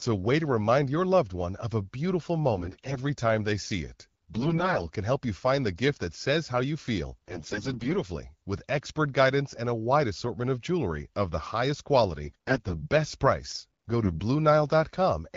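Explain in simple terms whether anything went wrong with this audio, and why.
Yes. AMR bit errors turn the speech hoarse and gargly at 2.54–2.98, 4.30–4.88, 7.28–7.96, 12.24–12.87 and 14.04–14.20 s. Unlike dropouts, the voice never vanishes; corrupted data scrambles its finer details.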